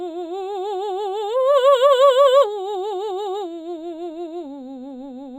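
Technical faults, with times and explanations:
Throughout, imaging from linear upsampling: the music's top end is dulled and topped by a faint metallic shimmer, which points to a low-rate source of about 11 kHz raised to 48 kHz by straight-line interpolation. That weak filter leaves a mirrored copy of the spectrum from about 5.5 to 11 kHz, some 35 dB below the music. Unlike aliasing, which folds content downward into the band, these images sit above the band edge and follow the high content.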